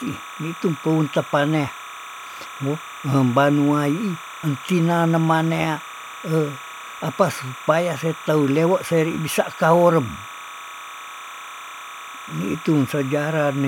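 Linear timecode from a neighbouring track or cable has leaked into this speech recording, a case of timecode bleed that runs for the whole clip. The code is a square wave flipping between tones around 1 and 2 kHz, and its cadence fits 29.97-frame code. Sitting roughly 15 dB below the speech, it comes through as a constant chirping warble behind the voice from start to finish.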